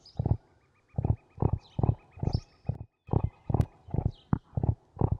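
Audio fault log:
2.75 to 3.07 s, sudden gain jump: the sound and its background noise drop together by about 16 dB at a single instant, stay at the lower level for roughly a third of a second, then jump back up just as abruptly at 3.07 s. There is no fade in or out at either edge, only a hard step in loudness. The likely cause is a digital gain setting or bit shift applied from one sample to the next without a ramp, then reversed the same way.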